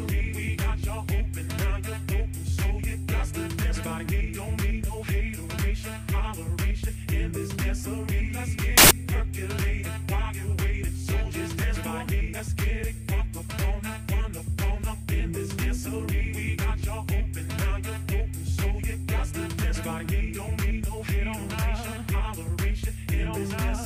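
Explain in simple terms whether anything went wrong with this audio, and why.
Samples built from the wrong bytes, from 8.78 to 8.91 s: for about a tenth of a second, each sample's bytes were joined wrongly, so tiny fast-changing details became the main signal, producing a sudden burst of loud, harsh noise.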